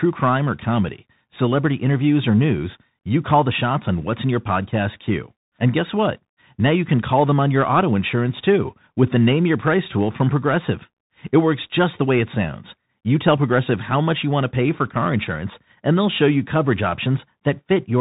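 Bluetooth CVSD headset codec, throughout the speech: each sample is coded as a single up-or-down bit with an adapting step, which fits a 64 kbps stream. Nothing passes above 3.8 kHz, and the coding damage is plainly audible as gritty, slope-limited distortion.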